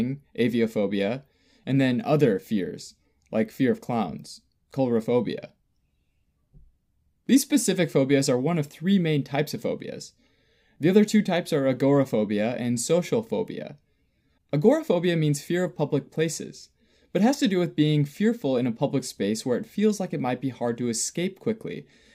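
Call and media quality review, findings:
No call or media quality findings to report for this clip.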